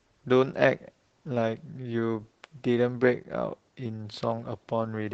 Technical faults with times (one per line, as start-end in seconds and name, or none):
0.00-5.13 Opus voice compression